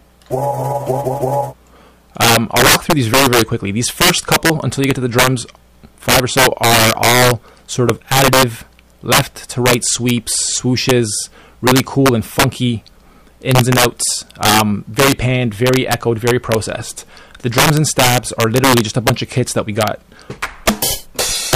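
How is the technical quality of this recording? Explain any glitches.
The quality is poor because of integer overflow throughout: with gain running about 10 dB too hot, a small share of peaks wrap to the opposite sign, producing violent cracks. On a waveform these look like vertical jumps between extremes, and on a spectrogram like broadband vertical streaks.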